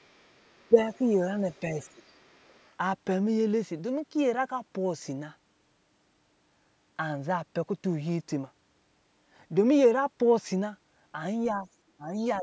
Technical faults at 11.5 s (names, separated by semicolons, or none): other side's voice leaking through; speech suppressed in double talk